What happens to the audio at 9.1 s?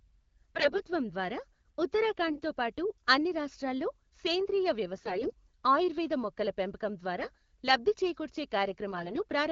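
At 9.1 s the speech falls inside a burst of AMR bit errors running from 8.91 to 9.20 s, just after "లబ్ధి చేకూర్చే". Roughly 7 percent of the weakly protected frame bits arrive flipped, so excitation pulses and fine gain and spectral values go astray. Pitch and level roughly hold, but the sound turns hoarse, scratchy and gargly. On a spectrogram the harmonics smear into ragged, noisy texture, while the waveform envelope stays about the same.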